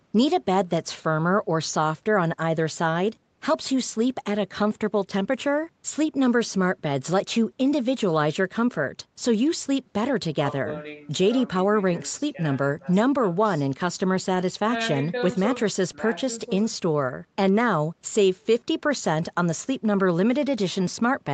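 Nothing in this speech recording is technically wrong. What can be heard of the call path is its bandwidth limit, with no content above about 8 kHz, which fits Opus coding in a WebRTC call.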